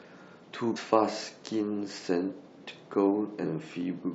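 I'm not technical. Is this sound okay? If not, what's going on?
No. There's damaged data in a compressed stream, twice: from 0.76 to 0.78 seconds and from 3.43 to 3.45 seconds. At both moments the speech was stored in a squeezed-down file format and some of the data got corrupted. The player misreads them, loses its place, and produces a short chirp or blip before it recovers.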